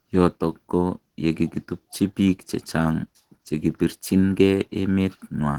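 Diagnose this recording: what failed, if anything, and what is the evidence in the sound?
The failure is at the codec stage: Opus voice compression, audible across the whole clip. The coding damage is plain throughout. The band is not narrowed, and content reaches up to 20 kHz, so the encoder kept fullband output. It ran in hybrid mode. A linear-prediction layer coded the speech band, and a transform layer covered everything above 8 kHz. The damage points to a bitrate near 16 kbps in 20 ms frames, too little to code the excitation cleanly.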